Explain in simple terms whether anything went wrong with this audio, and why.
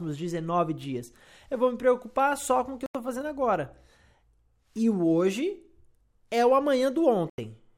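Twice the sound falls silent for about 85 ms: at 2.86 s, between "com o que eu" and "fazendo agora", and at 7.30 s. This is likely a Bluetooth dropout. Unlike an edit or stutter, playback resumes further on, as though it kept playing underneath.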